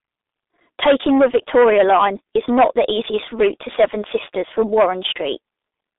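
From the first moment to the end, the speech carries heavy G.723.1 codec damage. The line passes roughly 250 Hz to 3.7 kHz and there's nothing above 3.8 kHz, so it sounds muffled and boxy. The codec sends only a coarse model of the voice per 30 ms frame, which fits its 6.3 kbit/s mode, and that model lags behind quick changes. The result is a hoarse, buzzy edge and consonants that smear into one another.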